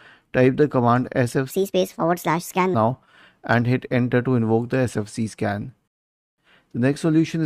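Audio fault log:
1.50–2.74 s, section at the wrong speed: for just over a second the sound runs 1.45 times too fast, and its pitch rises with it by about seven semitones, so everything turns high and hurried at once and then drops back to normal. The cause is likely playback against the wrong clock. Because speed and pitch shift together, it is a speed error, not a pitch-shift effect or a tempo change made while keeping pitch.
5.88–6.38 s, rebuffering stall: the sound stops dead into silence for about 503 ms, then carries on from exactly the point where it stopped. This is the player running out of buffered audio and waiting for more data. Nothing is skipped; the pause only adds time. That sets it apart from a dropout or packet loss, where part of the sound goes missing and the audio resumes further along.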